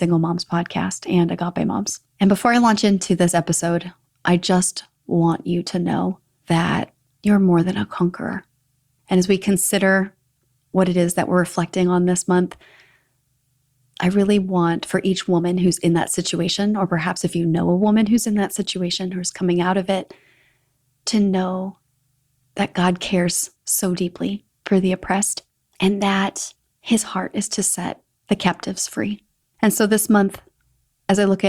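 From 25.44 s to 26.99 s, right after "deeply for the oppressed", the speech runs about 5.5 % fast and rises about 93 cents, just under a semitone, then drops back to normal pitch and pace before "heart is to set". Speed and pitch move together and switch abruptly at both edges. This is likely a drift correction step, where clock-matching software briefly changed the playback rate to bring its buffer back to target.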